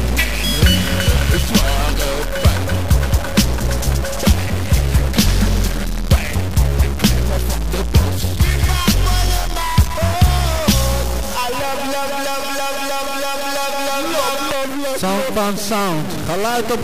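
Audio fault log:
Throughout, stuck bit: harsh, buzzy distortion whose errors sit around -20 dBFS and fill even quiet gaps, unlike clipping; likely one converter bit held fixed.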